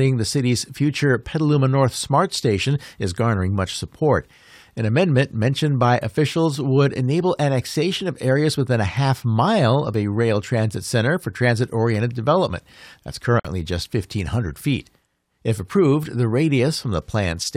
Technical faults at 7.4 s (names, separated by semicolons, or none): none